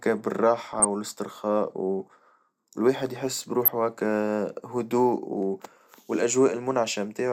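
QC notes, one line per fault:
0.73–0.85 s, DAB burbling: short blips of noise across six 24 ms frames as residual bit errors corrupt MP2 scale factors and samples, throwing single sub-bands out of level for up to a frame.
3.64–3.68 s, DAB burbling: shorter noise blips, roughly two frames long, from the same weak-reception bit errors slipping past error correction into the audio data.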